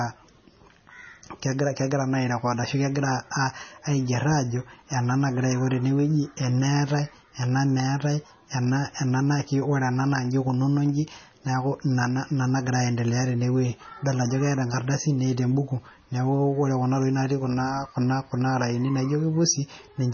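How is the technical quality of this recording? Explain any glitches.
The quality is poor throughout, with heavy MP3 compression across the whole speech clip. Nothing survives above 6.6 kHz, and the weak detail that remains warbles and swirls as faint frequency components drop in and out between frames, with sibilants turning chirpy and consonant onsets smeared. The damage most likely comes from an encoder starved of bits, which fits a rate around 24 kbps. A plain low-pass filter would dull the top just the same but leave no watery, fluttering texture.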